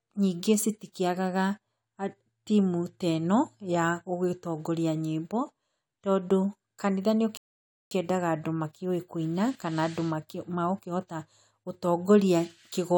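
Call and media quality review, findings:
Rebuffering stall, 7.37–7.91 s. Silence after "tondũ kanitha", resumes cleanly at "andũ makĩũĩ kũina". Player buffer underrun. Nothing lost, adds 0.54 s.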